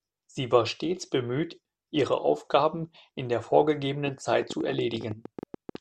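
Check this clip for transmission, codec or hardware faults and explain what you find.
A train of clicks runs from 4.06 to 5.76 s, likely from interference, a faulty connection or a power supply injecting pulses. Around twenty similar clicks arrive at an uneven 12.4 per second, peaking about 5 dB above the speech, and tick audibly through the pauses too.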